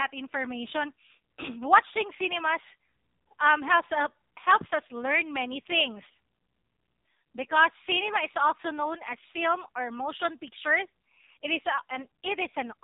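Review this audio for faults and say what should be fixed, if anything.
The speech carries AMR narrowband mobile codec damage throughout, and it is heavy. Nothing passes above about 3.8 kHz, so a spectrogram shows a flat ceiling with empty space overhead. Coarse vocal-tract modelling with sparse pulses leaves the voice buzzy and synthetic, which fits a low mode near 5.9 kbps. Capture or route the audio over a wideband path, or at least a higher AMR mode, rather than a narrowband mobile link.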